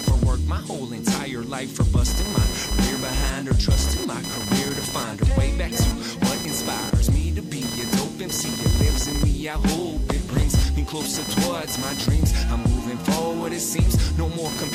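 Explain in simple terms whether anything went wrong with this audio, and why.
Something went wrong, and it lasts the whole way through: a buzzing or chirping that sits not far below the main audio and rises and falls on its own, with no connection to the sound itself. This is computer activity noise. When the computer's processor, graphics card or mouse suddenly works harder, the ground it shares with the audio circuit gets disturbed, and that disturbance leaks in as a pulsing whine, here repeating about a thousand times a second.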